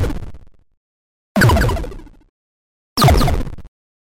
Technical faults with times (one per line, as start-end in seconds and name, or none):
0.00-4.13 doubled audio track